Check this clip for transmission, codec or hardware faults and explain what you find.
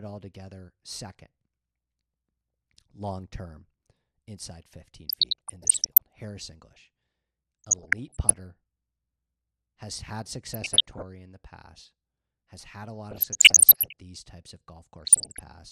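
The speech carries DAB burbling in five bursts: 5.09–5.98 s, 7.64–8.45 s, 10.54–11.02 s, 13.09–14.0 s and 14.96–15.39 s. Weak reception lets bit errors of around one percent or less slip past error correction into the MP2 data. Corrupted samples put short blips of noise in single sub-bands, and corrupted scale factors make sub-bands jump in level for up to a frame, giving a burbling over the speech.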